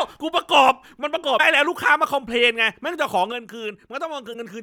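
At 1.35 s the speech breaks up briefly for about 56 ms, running to 1.40 s. This is damaged data in a compressed stream. Part of the encoded data at that point was unreadable, so the decoder misinterpreted the frame, lost sync and searched for the next valid frame header. The result is a brief glitch in the audio.

At 3.32 s the level drops abruptly by about 6 dB and stays there to the end of the clip. The speech and the background noise fall together, with no fade. This is a sudden gain jump, likely caused by a digital gain change applied from one sample to the next without a ramp.

A second instance of damaged data in a compressed stream follows at 4.30 s and lasts about 55 ms, to 4.35 s. It produces the same kind of brief blip, this time at the already reduced level.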